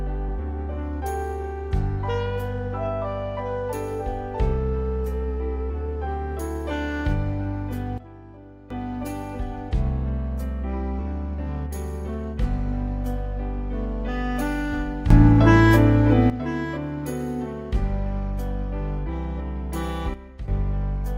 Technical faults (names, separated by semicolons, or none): sudden gain jump